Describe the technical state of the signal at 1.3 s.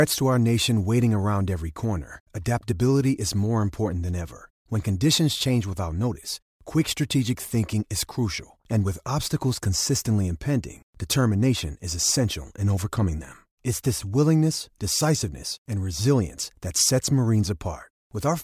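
At 1.3 s the signal is intact, with no audible dropout, clipping, distortion or other technical fault at that point.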